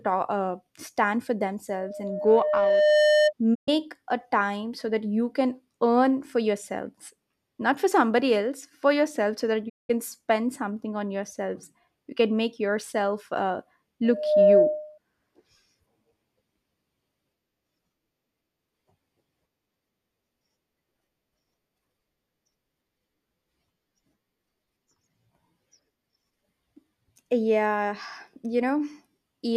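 Loudspeaker feedback squeal runs from 1.72 to 3.33 s. The microphone picks up its own loudspeaker, so a 607 Hz tone swells over about a second and a half, rising just above the speech.

Digital broadcast dropouts follow at 3.53 s and 9.68 s. Both times the receiver loses the signal. The sound fades out over 20 ms and goes silent for 120 ms, then for 192 ms.

At 14.04 s the squeal returns, building in under half a second and sitting well above the speech until 14.98 s.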